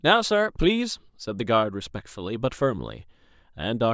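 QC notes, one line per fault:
No technical faults can be heard in the signal at any point in the recording.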